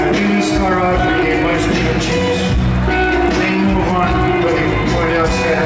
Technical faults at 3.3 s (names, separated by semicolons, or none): resampler restarted on every block